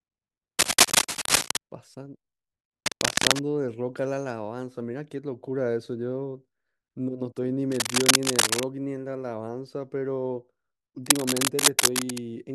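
Cable scratch noise breaks into the speech four times. The first burst runs from 0.59 to 1.58 s. It is the loudest, standing roughly 10 dB above the speech. Weaker bursts follow at 2.86 to 3.40 s, 7.72 to 8.63 s and 11.06 to 12.25 s. Each is dense, uneven scratching and rustling laid over the voice. The likely cause is a worn cable or connector being moved, so its contact resistance jumps rapidly.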